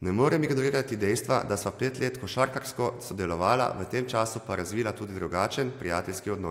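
No technical faults can be heard at any point in this speech recording.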